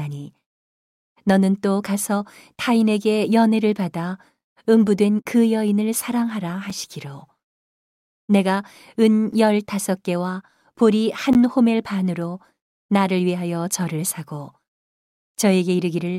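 At 6.70 s the speech drops out for about 5 ms, a block of digital silence whose length fits a 256-sample buffer that was not filled in time. It cuts out and back with no fade, so it is heard as a tick. At 11.33 s a second block, 16 ms long, is just long enough to register as a brief hole. On a waveform each shows as a flat stretch between abrupt edges; a spectrogram shows a thin vertical gap across all frequencies.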